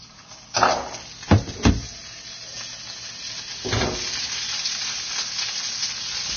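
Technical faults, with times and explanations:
Throughout, likely Vorbis compression: the audio is hissy and grainy, with nothing above 6.5 kHz and heavy damage that points to a bitrate near 20 kbps. Coarsely quantised treble becomes noise-like fizz and attacks smear. A spectrogram shows a hard ceiling and speckled, blotchy upper bands.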